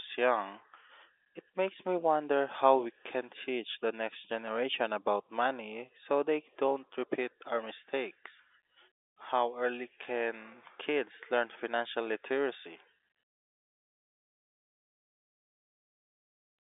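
There are no technical faults to describe in this speech, which carries the narrow telephone band of its G.711 coding, with nothing above 3.8 kHz.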